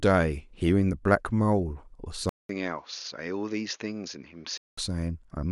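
From 2.29 to 4.78 s, after a 200 ms gap, speech turns duller and quieter, cut off above 6.8 kHz, likely an input switched to a poorer device.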